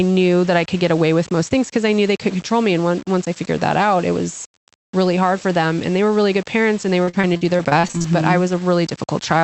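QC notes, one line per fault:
Throughout: low bit depth without dither, heard as gritty, signal-following distortion that sputters on quiet tails, likely from coarse rounding near 6 bits. The noise floor sits around 25 dB below the signal, and the waveform shows visible stair-steps in quiet passages.
7.03–8.06 s: repeated packet loss (robotic sound), just after "good parents and they". About a dozen short holes, the longest 41 ms, were patched by stretching earlier sound, so roughly a third of the span turns choppy. The spectrogram shows smeared, repeated frames and abrupt breaks.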